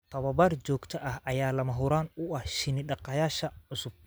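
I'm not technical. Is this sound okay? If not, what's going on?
Yes, nothing in this speech recording points to a technical problem with the signal.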